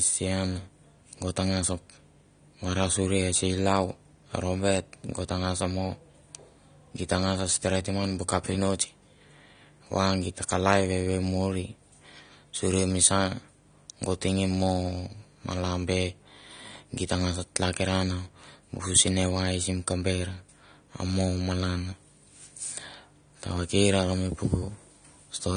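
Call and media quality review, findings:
Speech dull and band-limited throughout; nothing above 9.7 kHz. Plainly audible warbling, fizzy sibilants, smeared transients. Likely AAC compression, AAC-LC at a low bitrate, consistent with about 32 kbps. Encoder lowered cut-off, starved remaining bands of bits.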